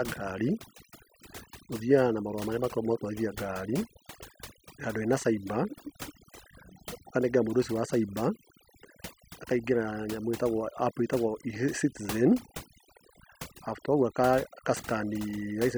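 From start to finish the background sits at near silence scattered with twinkling specks. This is overdone noise removal: the reduction was set so strong that bands near its noise estimate were cut away, taking quiet parts of speech too.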